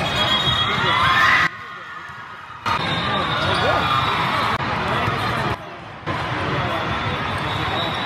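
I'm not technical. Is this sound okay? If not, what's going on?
No. Twice the sound abruptly drops much quieter, then snaps back: first from 1.47 to 2.66 seconds, where the drop is deep, and again from 5.54 to 6.07 seconds, where it is less severe. The background hiss falls and rises together with the main sound. This is a sudden gain jump. The likely cause is a volume setting being switched instantly instead of being faded smoothly, so the level changes in a single step.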